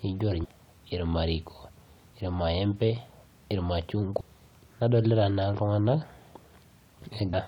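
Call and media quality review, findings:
Damaged data in compressed stream, three events in speech: 0.43–0.45 s, 4.19–4.22 s, 7.33–7.35 s. Each is a brief chirp or blip of roughly 25 ms. Probable component: decoder input, file or transport layer. Mechanism: corrupted or overwritten bytes make frames unreadable, so the decoder drops sync, emits garbage or nothing, then resynchronises at the next valid frame header.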